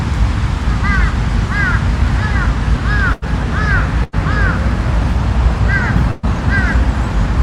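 Bursts of packet loss at 3.13, 4.04 and 6.11 s: runs of audio were lost or arrived too late, so the receiver stretched the last sound into a fading buzz or hiss for about 80 to 120 ms, then resumed with that stretch skipped.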